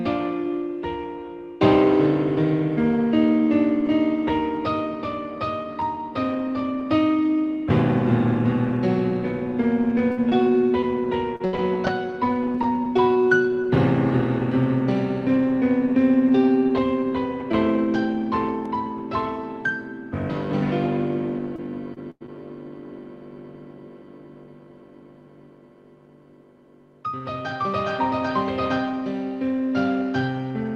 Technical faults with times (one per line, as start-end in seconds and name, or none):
10.11-12.68 repeated packet loss (robotic sound)
18.66 block of digital silence
20.84 lost packet rebuilt from error correction
21.56-22.30 repeated packet loss (robotic sound)